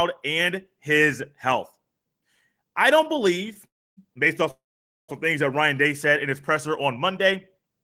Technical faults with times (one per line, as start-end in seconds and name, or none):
3.67-3.99 call audio freeze
4.51-5.10 call audio freeze